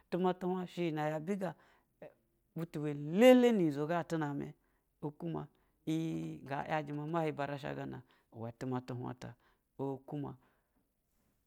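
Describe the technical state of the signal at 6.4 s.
A nearby 2G phone sending short signalling bursts, with no call audio, is being picked up and rectified by the audio circuitry from 6.14 to 7.42 s, covering 6.4 s. These GSM signalling bursts come through as a galloping dit-dit-dit of brief 217 Hz buzzes, roughly 25 dB below the speech.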